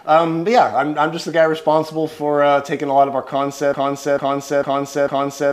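At 3.74 s a broken-record loop starts: a 448 ms fragment repeats about four times to the end, likely a stalled player resending its last buffer.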